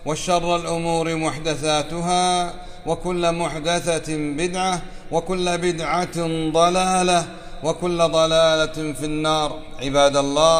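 Nothing in the sound points to a technical fault at any moment, so there is no time, cause or value to report.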